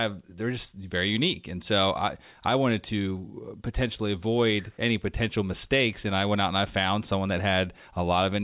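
No technical faults can be heard anywhere in the speech.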